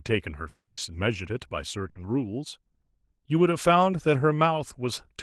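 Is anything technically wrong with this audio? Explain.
Yes, there are two gaps in the speech.

From 0.49 to 0.79 s, a long network dropout is the likely cause. About 280 ms of audio is missing, replaced by a concealment buzz or hiss that fades into roughly 60 ms of silence before the speech returns.

From 1.89 to 1.97 s, a burst of packet loss removes about 60 ms. The receiver stretches the last sound into a brief, fading continuation before resuming further on.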